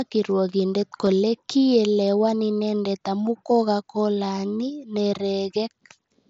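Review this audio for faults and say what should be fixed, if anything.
At about 1.06 s there is concealed Bluetooth headset packet loss lasting about 15 ms, which fits two consecutive headset frames going missing. The receiver patched the gap by repeating the best-matching slice of the preceding waveform, so the dropout is heard as a brief buzzy tone held at full level, with a small warble where real audio returns. On a waveform this appears as a short copied cycle with a slight seam where real audio resumes. On a spectrogram it appears as a thin column of held, unchanging harmonics beneath the 8 kHz ceiling of the mSBC link. To prevent it, keep the headset close to the phone with a clear line of sight and reduce 2.4 GHz interference.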